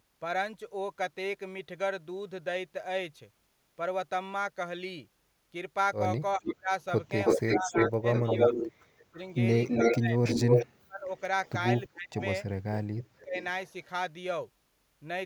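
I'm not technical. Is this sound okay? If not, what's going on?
No, there are two problems. Speech suppressed in double talk runs from 6.35 to 13.36 seconds. The voice keeps dipping, at times almost disappearing, for about two seconds in total across that stretch. This is likely the call's echo-removal system at work. When both people talk at once, it can't tell the real voice from the other person's voice coming out of its own loudspeaker, so it turns everything down.

An echo leak overlaps it, from 6.46 to 12.25 seconds. A second copy of the voice arrives about a third of a second (321 ms) late, roughly as loud as the original, so it sounds doubled. A fainter echo, delayed 374 ms and barely audible, returns from 13.18 to 13.85 seconds. The likely cause is someone on speakerphone whose echo remover missed part of what their microphone picked up from the loudspeaker and sent it back.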